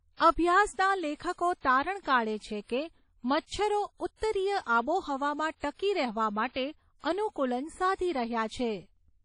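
Speech runs throughout with a washy, ringing smear, hiss breathing with the voice and nothing above 10.1 kHz, likely WMA compression at a low bitrate around 32 kbps, smeared over long blocks rather than MP3's sharper swirl.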